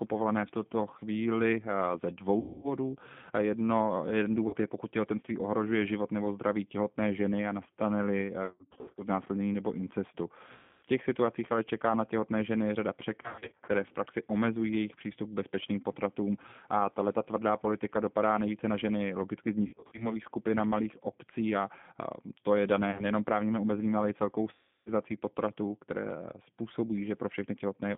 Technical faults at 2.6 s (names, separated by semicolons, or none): G.729 codec; VoIP packet loss concealed by the speech codec